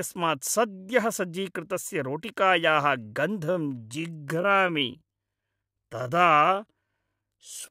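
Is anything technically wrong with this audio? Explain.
Yes. From 3.41 s to the end, a time-stretched section plays at about 0.67× speed, likely software lengthening the audio by repeating short pieces while holding pitch. The pace abruptly drags while the pitch stays the same, and its spectrogram shows stretched harmonics with repeated segments.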